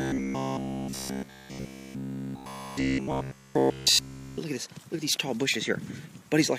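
From about 0.02 s right through to 4.38 s you get robotic sound from repeated short buffers. The whole stretch turns into a stiff, metallic buzz locked at about 66.7 Hz. That pitch fits a buffer of roughly 15 ms being replayed over and over, with pretty much all of the real audio in that span skipped. The likely cause is new audio arriving too seldom, so the playback side keeps looping the last chunk it had.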